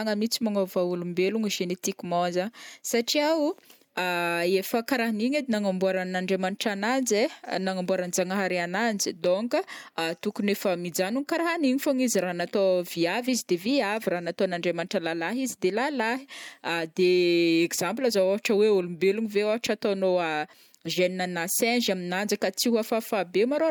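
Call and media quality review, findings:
No audible technical faults were found in this speech recording, with the signal path showing no dropouts, distortion, level problems or timing disturbances to report.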